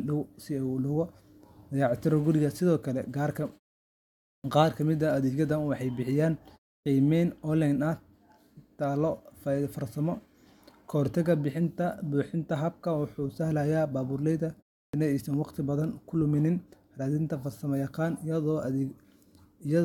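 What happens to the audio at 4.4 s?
At 4.4 s there is a clipped start after a pause: following a silence of about 0.89 s, the output is still waking, so the first 40 ms, to 4.44 s, are swallowed. Speech resumes abruptly without its opening sound, unlike muted pauses, which lose nothing.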